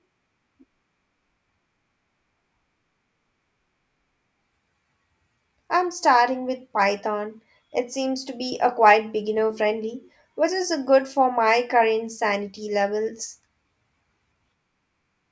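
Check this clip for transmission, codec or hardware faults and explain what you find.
Nothing here points to a transmission, codec or hardware problem; the speech comes through without anything that needs flagging.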